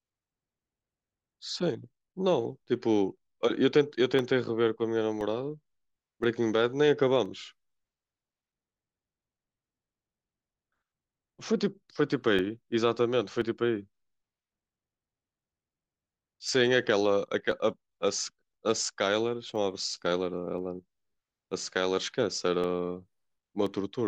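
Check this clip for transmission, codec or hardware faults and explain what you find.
One hardware-side fault is present: periodic USB or driver dropouts across the whole speech clip. From 0.10 s to 23.67 s, a short gap of about a millisecond recurs every 1.02 s, around twenty times in total. Something in the system stalls the USB transfer or audio driver on a fixed schedule, and the samples missed during each stall are replaced by silence. The result is an evenly spaced tick, audible whenever the speech is present.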